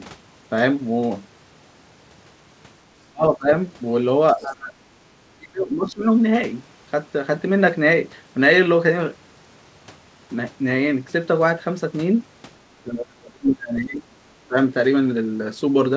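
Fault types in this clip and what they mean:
speech suppressed in double talk: the speech dips by roughly 20 to 35 dB in five stretches, longest 12.69 to 14.17 s, likely an echo canceller treating overlapping talk as echo.
other side's voice leaking through: a brief second voice, about 20 dB below the speech, is heard at 4.33 to 4.44 s, likely residual loudspeaker echo the canceller missed.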